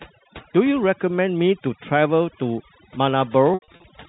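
A short speech recording carries overdone noise removal throughout: the noise reduction was set so aggressively that frequency bands near the noise estimate are pulled down or switched off, taking quieter parts of the voice with them. The background falls to near silence with twinkling specks. From 3.54 to 3.84 s there is packet loss with pitch repetition. About 200 ms of audio is missing, scattered across 340 ms, which fits several lost 20 ms packets, with the longest gap 80 ms. The receiver fills each gap by repeating the last pitch period, so the shorter losses come across as a brief held, buzzy tone, and the longer run fades out before speech cross-fades back in. The path sounds like G.711 mu-law telephone coding, with nothing above 4 kHz, and it adds at most faint damage of its own.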